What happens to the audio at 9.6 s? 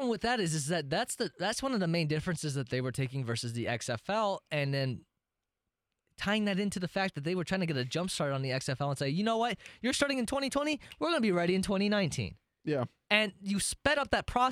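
Nothing goes wrong at 9.6 s; the speech runs through that moment intact, with no break, click or distortion.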